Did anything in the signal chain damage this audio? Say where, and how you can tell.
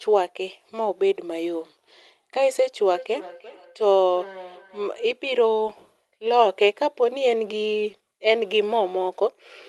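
Yes, at the call-processing stage there's feedback echo between two devices from 2.91 to 5.12 s. The speech comes back roughly every 0.3 s, thinner and ringier each pass, peaking about 19 dB below the talker. Each device's echo canceller only removes its own playback, so the loop survives.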